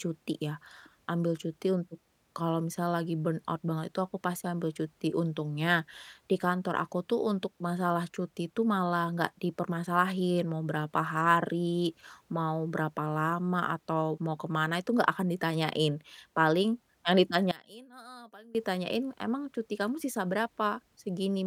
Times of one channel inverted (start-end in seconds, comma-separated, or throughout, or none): 17.51-18.55